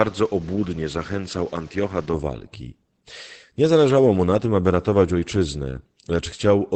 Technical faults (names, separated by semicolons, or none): Opus voice compression; input switched to a poorer device